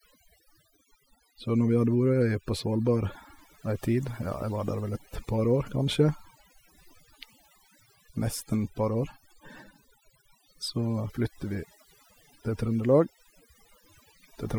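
Overdone noise removal runs through the whole speech clip. The noise reducer was set too hard. It pulls any frequency band near its noise estimate down or out. Quiet parts of the voice vanish with it. Gaps drop and break up into twinkling specks.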